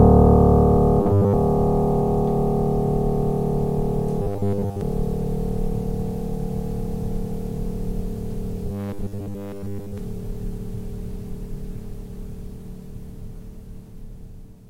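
A music clip with a robotic sound from repeated short buffers in three places. It runs from 1.0 to 1.34 s, from 4.22 to 4.81 s, and from 8.67 to 9.98 s. In each stretch the music hardens into a rigid, metallic buzz at 100 Hz. That pitch fits a 10 ms slice being replayed over and over. Most of the real audio in those spans is lost. The likely cause is new audio arriving too seldom, with the last short buffer repeated to fill the gap.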